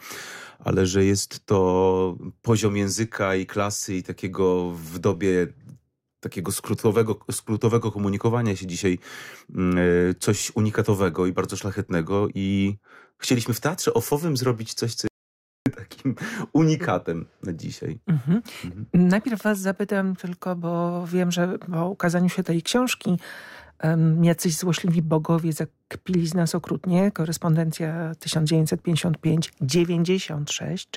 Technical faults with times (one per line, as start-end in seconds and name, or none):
15.07-15.66 audio dropout to silence